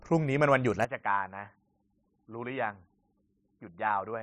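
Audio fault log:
0.85–4.23 s, input switched to a poorer device. With no gap, the speech turns dull and boxy, losing everything above 3.8 kHz. Level falls about 10 dB. A faint new hiss sits roughly 55 dB below it. Likely a switch to a narrower-band microphone.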